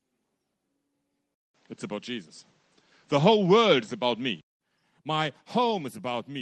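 Speech, where from 1.34 s to 4.61 s the sound turns duller and changes level by around 5 dB, with nothing above 8.2 kHz, a faint new noise floor far below the voice, and a 0.2 s gap at the switch: likely an input switched to a poorer device. The dropout and shifted noise set it apart from a simple bandwidth drop, and the call path's ceiling sits higher, near 12 kHz.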